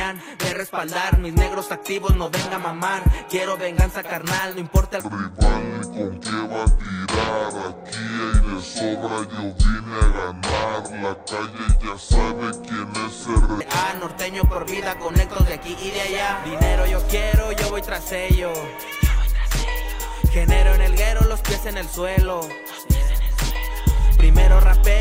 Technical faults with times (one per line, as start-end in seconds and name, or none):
0.00-4.00 adaptive stream starting at a low bitrate
5.00-13.61 section at the wrong speed